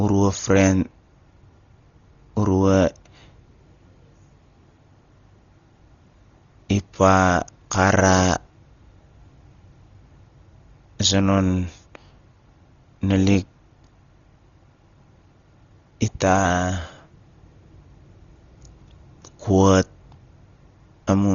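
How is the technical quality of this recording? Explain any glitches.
Poor: heavy codec damage runs through the whole recording. The speech was likely passed through Dolby Digital compression at a very low bitrate, around 32 kbps. The encoder cut everything above 7 kHz and starved many frequency lines, which the decoder filled with noise, so the speech sounds dull and wrapped in rough, fluttering grain.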